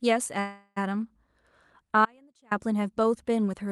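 From 0.39 to 0.78 s the speech stops and a call audio freeze takes over. The last sound is stretched into a fading buzz or hiss for about 370 ms, ending in roughly 10 ms of silence before the speech resumes where it broke off. This is likely a jitter buffer that ran dry while packets were held up in transit. Nothing is lost, but everything after this point arrives about 370 ms later than it should.

From 2.05 to 2.51 s there is an audio dropout to a faint residue. The speech cuts out abruptly for about 460 ms and cuts back in just as sharply, with no fade at either edge. During the gap only a faint trace of the signal remains, roughly 35 dB below normal level. This points to the wanted signal likely being lost upstream while the path after the break stayed live and kept passing that low leak.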